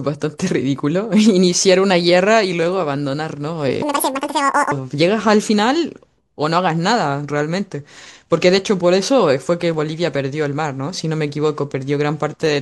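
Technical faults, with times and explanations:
3.82–4.72 s, section at the wrong speed: this stretch was likely played against the wrong clock, running at 1.97 times its recorded speed. Timing and pitch shift together, so the speech turns hurried and high, rising by around ten semitones before snapping back.
9.74 s, block of digital silence: a run of samples was zeroed, probably because the output buffer wasn't filled in time. The 1.45 ms hole, which fits a 64-sample block, starts and stops with no fade, so it is heard as a sharp tick.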